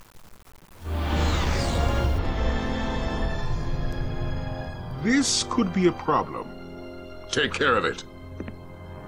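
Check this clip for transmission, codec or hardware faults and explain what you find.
One fault turns up, at the start of the clip.

From 0.0 to 2.19 s there is low bit depth without dither. The sound carries a grainy distortion whose noise follows the signal rather than sitting underneath it as a steady floor, at around 30 dB below the signal. The likely cause is rounding to very few levels with no dither, which fits about 7 bits. On a waveform the quiet stretches would look stepped. On a spectrogram the error would show as broadband grit that rises and falls with the sound.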